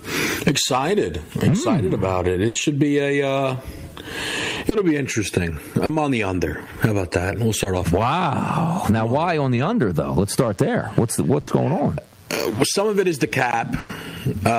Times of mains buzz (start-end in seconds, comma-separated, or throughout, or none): 10.08-14.58